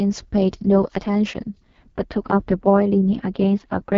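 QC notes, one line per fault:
Throughout: AMR wideband (HD Voice) codec. The speech sounds rough and raspy, with nothing above 7.5 kHz, which fits the lowest 6.6 kbit/s mode.
1.92 to 3.98 s: channel delay (comb filtering). One channel lags by a few samples before the mono sum, cancelling high frequencies around 7 kHz. The sound turns hollow and phasey.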